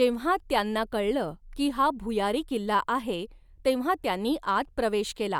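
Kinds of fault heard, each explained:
No faults can be heard anywhere in this recording.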